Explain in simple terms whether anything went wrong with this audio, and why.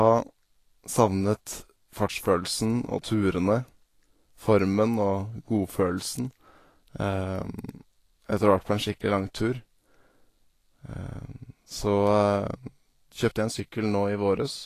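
The speech sounds hissy and grainy from start to finish. Nothing comes through above about 14.2 kHz. The likely cause is Vorbis compression at a low quality setting. Fine detail in the highs was coded so coarsely that it turned into noise.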